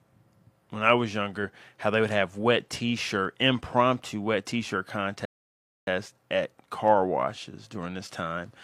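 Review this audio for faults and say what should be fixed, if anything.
A rebuffering stall interrupts the speech at 5.25 s: the audio drops to silence until 5.87 s, then picks up exactly where it left off, just before "at car". The player exhausted its downloaded buffer and had to wait for more data, so nothing is skipped or repeated, but 0.62 s of dead air is inserted. To prevent it, enlarge the playback buffer or preload more audio before starting, so delivery hiccups don't drain it.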